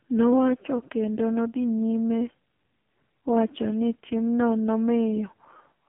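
Speech, carried through the AMR narrowband mobile codec from start to finish. The band is squeezed to roughly 150 Hz to 3.4 kHz, with nothing above 3.5 kHz, so it sounds like a phone call. Each 20 ms frame is rebuilt from a vocal-tract model driven by a few pulses in each 5 ms. The damage is heavy. Voiced sounds turn buzzy and synthetic, which points to AMR-NB at one of its lowest modes, around 5.15 kbps.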